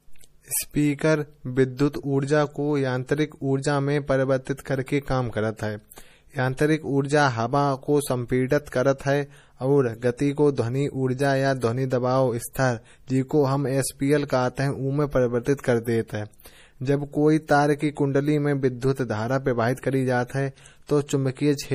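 Speech throughout shows low-bitrate audio saved at a high bitrate: nothing exists above 15.1 kHz, and the smeared, watery coding artefacts fit an MP3 around 40 kbit/s, likely re-encoded at about 192 kbit/s. Unlike a plain low-bitrate file, the large file's extra data restores nothing.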